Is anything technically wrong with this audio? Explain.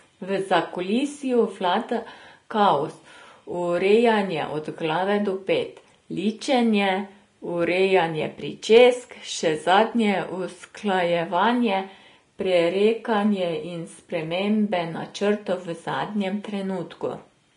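Yes. Throughout the speech there is plainly audible Vorbis compression, likely at a low bitrate near 33 kbps. Nothing remains above 10.6 kHz, and the remaining treble is quantised so coarsely that its detail becomes grainy hiss. A plain low-pass filter would sound dull rather than hissy.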